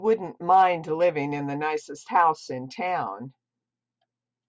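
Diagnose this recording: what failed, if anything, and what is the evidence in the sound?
Nothing in the sound points to a failure anywhere along the chain, so there's really nothing to diagnose in this speech recording.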